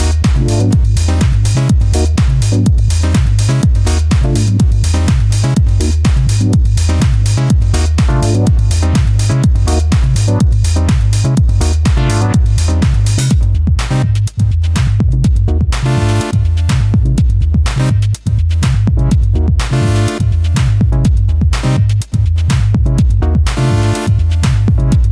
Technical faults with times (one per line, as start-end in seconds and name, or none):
none